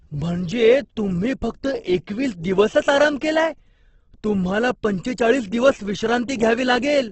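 Throughout, the speech sounds grainy and rough, with nothing above 8.1 kHz. That points to likely Opus compression, heavily squeezed near 12 kbps in music mode.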